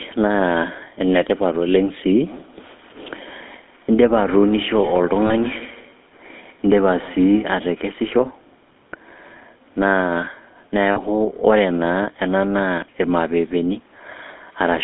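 The whole thing runs through the GSM full-rate codec, and you can plainly hear it. The speech has that buzzy, gravelly edge you get when the codec rebuilds the voice from a vocal-tract model driven by sparse, regularly spaced pulses, and the band is squeezed to roughly 250 Hz to 3.6 kHz, which fits the old 13 kbps full-rate coder.

From 2.26 to 7.82 s there's feedback echo between two devices. Another device in the room is playing this call out loud, and this microphone picks it back up. The echo canceller only knows about its own loudspeaker, so it leaves that sound alone. Each bit of speech comes round again at roughly 150 ms, thin and a bit ringy, peaking at about 19 dB below the direct speech.

Then there are the lost GSM frames, at 5.26 to 5.32 s and again at 10.92 to 10.99 s, each about 40 ms long, which fits two dropped frames apiece. The decoder covers the gap by repeating the last good frame's settings. 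You hear a short, rough, metallic smear held across the gap instead of a clean dropout. The first one falls inside the echo stretch.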